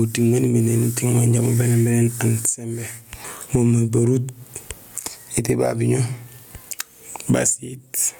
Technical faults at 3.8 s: gain pumping

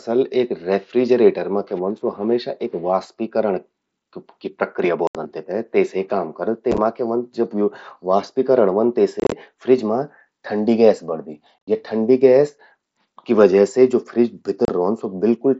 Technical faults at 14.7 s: unconcealed Bluetooth headset packet loss

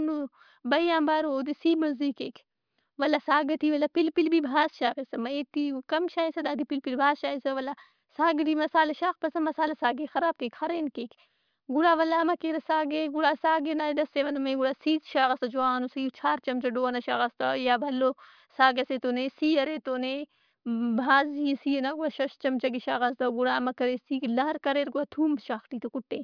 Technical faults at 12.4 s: none

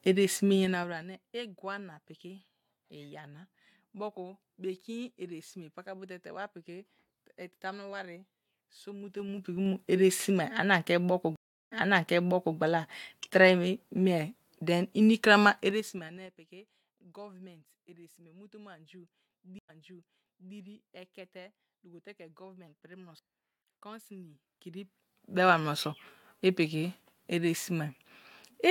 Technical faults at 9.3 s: zipper noise

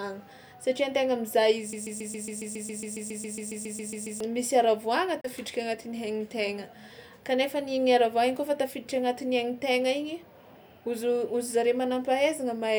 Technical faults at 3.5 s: broken-record loop

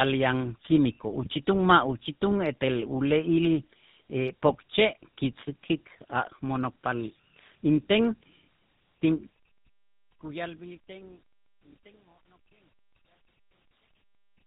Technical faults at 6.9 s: tandem speech coding

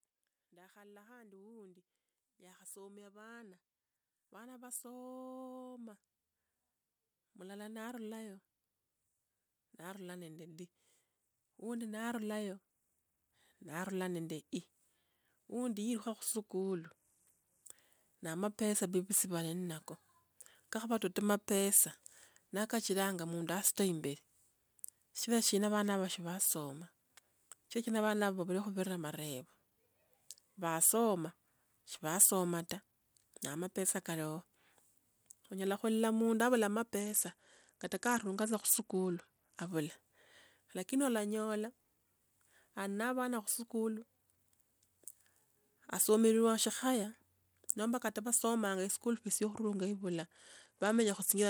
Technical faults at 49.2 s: Bluetooth SBC bit pool drop

